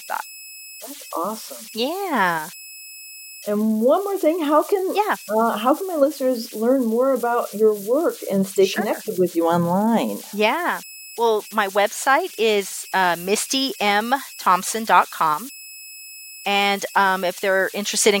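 Throughout, converter idle tones whistle around 3 kHz in the pauses: an undithered delta-sigma converter stuck in repeating patterns, sitting about 20 dB under the speech.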